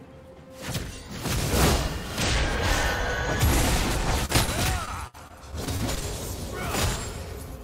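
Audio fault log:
4.25–4.31 s, 4.33–4.36 s and 4.44–4.49 s, short concealed packet loss: three brief holes, 20 to 40 ms each, where audio arrived too late to play. The receiver extended the preceding sound to bridge each one, so the passage briefly smears and wobbles.
4.85–6.04 s, repeated packet loss (robotic sound): audio keeps dropping out across this stretch, with gaps up to 62 ms and about 15 percent of the span patched. Each patch merely prolongs the previous sound, giving a choppy texture with pieces missing.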